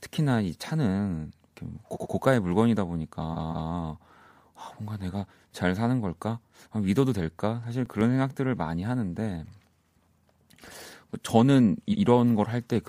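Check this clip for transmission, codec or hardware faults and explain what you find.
Two kinds of fault are present in this speech clip: repeated frames in three places, and one burst of CD scratch ticks.

Repeated frames occur at 1.93–2.12 s, 3.32–3.69 s and 11.91–12.01 s. A block of compressed audio was delivered more than once, so the decoder replays it. The first block is 93 ms played two extra times, the second 186 ms played two extra times, and the last 93 ms repeated once. The stutter adds about 0.19 s, 0.37 s and 0.09 s, and each seam can carry a small blip. Unlike a dropout or a skipping buffer, nothing is lost. The same fragment comes back intact.

CD scratch ticks appear between 7.56 and 8.30 s as six brief ticks, each only a few milliseconds long. A blemish on the disc corrupts more data than error correction can rebuild on successive rotations, and the player patches or mutes those samples. 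Unlike random digital clicks, the ticks fall at a steady rotation-linked rhythm and stay confined to one short stretch. Unlike frame repeats, they neither lengthen the audio nor replay anything.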